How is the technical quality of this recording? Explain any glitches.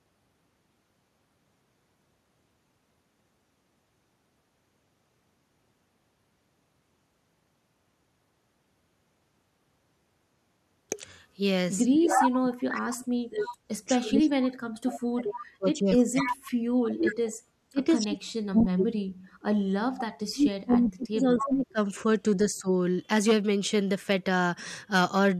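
The recording has clear call-processing problems in its second half, between about 11.8 and 22.7 seconds, where the speech is repeatedly turned down and a delayed echo of it leaks through.

Speech suppressed in double talk runs from 11.84 to 21.79 s, with a briefer dip at 22.23 to 22.68 s. It likely comes from an echo canceller that, with both sides talking at once, could not tell this talker from loudspeaker echo and attenuated everything. Around seven seconds of that first stretch is affected. The speech drops by as much as about 40 dB, and the later dip is about 15 dB.

Echo leak appears in short scraps at 12.15 to 12.28, 13.45 to 13.49, 16.20 to 16.35, 18.59 to 18.63, 20.71 to 20.77 and 21.37 to 21.42 s. Each is a copy of the speech delayed by 259 ms, ranging from roughly equal to the speech down to about 15 dB below it. This is likely loudspeaker pickup that the loudspeaker side's echo canceller failed to remove.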